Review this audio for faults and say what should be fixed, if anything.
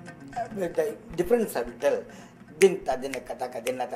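A DC step at 1.24 s shifts the waveform's baseline by about -34 dBFS, then decays through a 2 Hz high-pass, thumping low and streaking across the spectrogram's bottom. To prevent it, stabilise converter calibration and input offsets before recording, or use a DC-blocking high-pass early in the chain.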